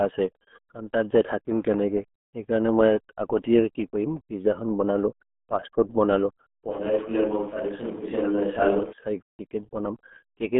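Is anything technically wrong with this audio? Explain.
Yes, there are two faults. Throughout, the speech carries RealAudio 14.4 codec damage. The band is squeezed to a telephone-like 200 Hz to 3.4 kHz with nothing above 3.7 kHz, and the heavy, gargly smearing fits a very low bitrate near 8 kbit/s. The gargly artefacts separate it from a simple low-pass filter.

From 6.71 to 8.93 s, the voice suddenly turns roomy, hollow and thinner in bass. It drops about 5 dB, with room noise about 25 dB below the speech, and then snaps back. This is likely a switch to a distant microphone. The abrupt change in and out separates it from a gradual fade.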